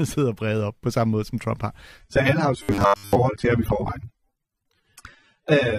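At 2.01 s the speech abruptly turns swirly, with no gap, which fits an adaptive stream at a lower bitrate, roughly 96 dropping to 24 kbit/s, lasting to the end. From 2.63 to 3.16 s the speech becomes a stiff, metallic 100 Hz buzz, likely robotic sound from repeated short buffers, about 10 ms each, covering most of that stretch.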